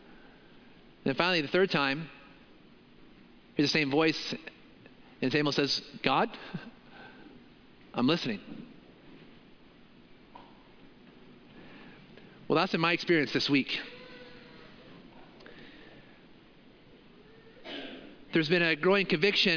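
No technical faults are audible.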